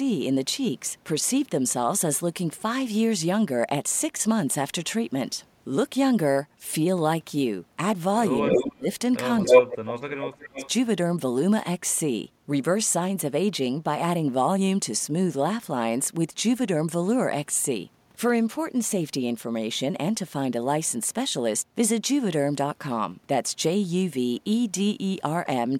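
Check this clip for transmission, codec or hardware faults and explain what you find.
Two related faults appear in the speech between 8.4 and 10.7 s.

Speech suppressed in double talk, 8.42–8.88 s and 9.45–10.57 s: the echo canceller was likely confused by both ends talking at once, so it attenuated the near talker too. The speech dips sharply, by up to about 25 to 30 dB.

Echo leak, 8.46–8.65 s, 9.44–9.62 s and 10.21–10.69 s: a loudspeaker-side canceller likely failed to remove all the returned sound. A copy of the speech arrives about 270 to 280 ms late. The first two scraps are louder than the speech, and the last is well below it.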